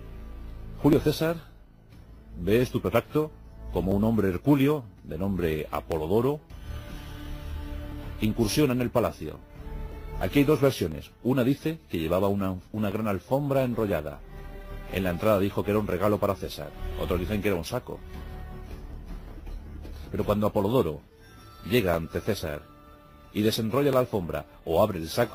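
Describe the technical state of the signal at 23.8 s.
A regular tick recurs about once a second, from 0.93 s to 24.93 s: periodic USB or driver dropouts, each skipping roughly a millisecond of audio.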